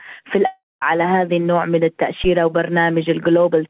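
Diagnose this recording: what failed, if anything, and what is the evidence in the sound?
From 0.46 to 0.83 s the sound gives way to a fading buzz, then silence, before resuming with material missing. This is likely a long network dropout with concealment.

At 2.24 s a brief low thump, decaying in about 16 ms, points to a phantom power thump: a supply switching on a live input in the analogue wiring.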